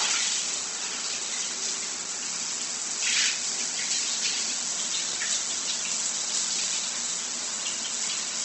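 From start to finish, the sound carries plainly audible damage, likely from Opus compression. Nothing sits above about 8.2 kHz, so the top end is cut off and the audio sounds dull. Tonal parts turn grainy and rough rather than swirling. The encoder keeps each band's energy but, short of bits, fills the detail with noise or copied lower bands. That points to a low rate, near 16 kbps.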